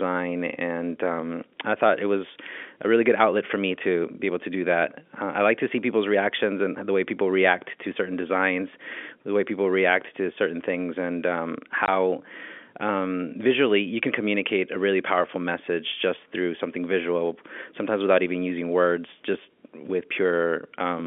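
At 11.86 to 11.88 s a packet was lost in transit and the receiver substituted silence, which is packet loss filled with silence. The speech drops out abruptly for 20 ms, consistent with a single missing packet, and the gap has hard edges, heard against the narrow G.711 telephone band.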